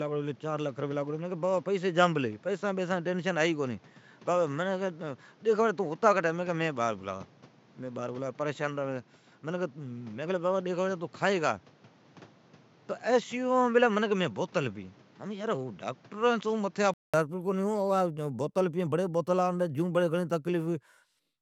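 A speech clip. From the start to 17.14 s it sounds dull, with nothing above 7.6 kHz and a noise floor about 30 dB down. A 200 ms gap follows. Then it opens up at similar loudness. The likely cause is an input switched to a poorer device.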